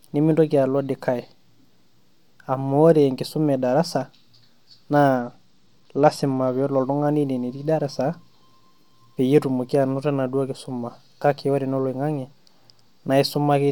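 Speech whose treble goes dull and gritty from 5.14 to 6.68 s: a Bluetooth SBC bit pool drop, which fits a fall to roughly 96 kbps, starving the upper sub-bands.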